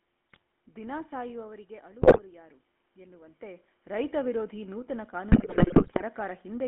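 Throughout, the speech carries GSM full-rate codec damage. Its pulse-driven vocal-tract model leaves a plainly audible buzzy, gravelly roughness, and the band runs only from about 200 Hz to 3.4 kHz, which fits a 13 kbps full-rate link. A spectrogram shows a hard upper edge and grainy, smeared harmonics.

GSM bit errors break in at 0.32–0.42 s, 2.02–2.20 s and 5.30–6.02 s, the last burst the longest. Corrupted filter, pitch and gain values make the decoder squawk, pop and gargle. The waveform shows sudden level spikes, and the spectrogram shows jagged, frame-wide bursts of distorted energy. The level shifts near 1 s and 3 s as the talker moves, which is not a fault.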